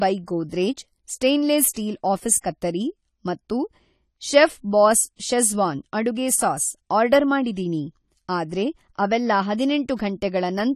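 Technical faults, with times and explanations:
throughout: AAC compression. The speech has likely been through an AAC-LC encoder starved of bits, consistent with roughly 32 kbps. Nothing survives above 14 kHz, and coarse quantisation leaves the sound plainly dull and smeared, with a fizzy, warbling texture on sustained sounds and sibilants.
1.74 to 1.76 s: pre-echo. The encoder spread quantisation noise sized for a loud attack across its whole block, including the quiet stretch just before it. About 26 ms of hiss arrives ahead of the attack, which then sounds softened and smeared.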